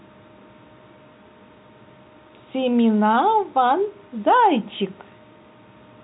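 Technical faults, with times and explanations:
No technical faults detected.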